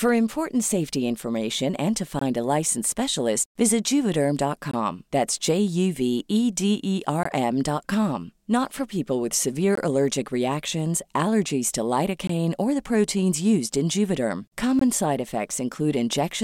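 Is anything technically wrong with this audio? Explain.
Yes. There is a gap between chunks: six 20 ms silent holes break up the speech at 2.19, 4.71, 7.23, 9.75, 12.27 and 14.79 s. The first falls between "safety information and to" and "a licensed specialist visit". The audio was delivered in 2.5 s chunks with silence inserted at each join, so nothing is lost but the flow is regularly interrupted.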